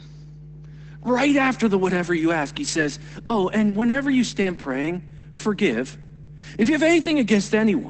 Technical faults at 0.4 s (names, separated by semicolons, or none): mains hum